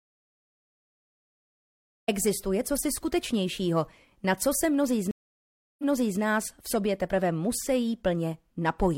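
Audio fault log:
0.00–2.08 s, audio dropout to silence: The input was likely lost before the clip began, through a disconnected device, a broken link or a stray mute, while the recorder kept writing silence. The file therefore opens in silence, with no room tone or background hiss at all, and the sound enters abruptly at 2.08 s, already under way rather than starting cleanly. Whatever was present before that point is simply missing.
5.11–6.20 s, stream reconnect: The connection dropped, the player stopped producing output, then reconnected and started a fresh decoder partway through the stream. About 0.67 s of dead silence follows the break. When playback returns, the server has resent a burst of earlier material, so the audio picks up about 0.42 s before where it cut off, and that short stretch is heard a second time.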